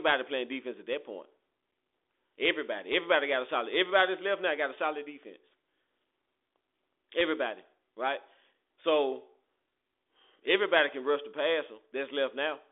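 The speech arrives through G.726 ADPCM coding at 40 kbit/s with no technical faults, carried in a telephone band of roughly 300 Hz to 3.7 kHz with nothing above about 3.8 kHz, and any trace the coding leaves is at most faint.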